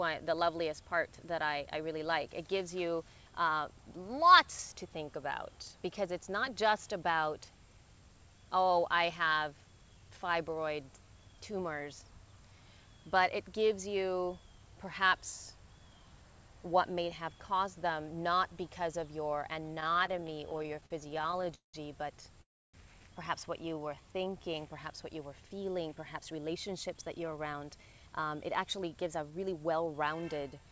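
From 19.76 to 21.76 s the audio drags and stutters, halting 36 times as repeated stalls (stutter), the longest wait lasting 189 ms. Packets kept arriving late, the jitter buffer kept running empty, and the receiver stretched the last sound forward each time, filling 574 ms, about 29% of that span, with nothing lost.

At 22.42 s the sound stops for 340 ms: a brief continuation, then 290 ms of silence before it resumes where it left off. This call audio freeze likely comes from packets held up in transit, with the jitter buffer running dry and 320 ms of delay added.

From 23.62 to 24.43 s the audio slows to 82% speed without any change in pitch, so sounds are drawn out. This is jitter buffer slow-down: to build a reserve, the receiver repeated single pitch periods or bits of pauses, adding 151 ms.

From 25.96 to 30.66 s the audio runs hurried at 109% speed, again at the same pitch. In this jitter buffer speed-up, the receiver was holding more audio than it aims for and removed short slices of one or a few pitch periods, roughly half a second in all. 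Throughout, nothing sounds above 8 kHz, which fits a G.722 call codec at 64 kbps.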